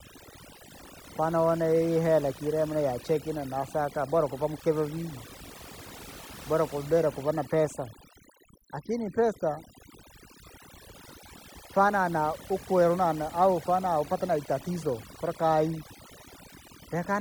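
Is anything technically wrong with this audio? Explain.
Yes, overdone noise removal runs through the whole speech clip: bands near the noise estimate get gated out, taking quiet parts of the voice with them and leaving twinkly near-silent gaps.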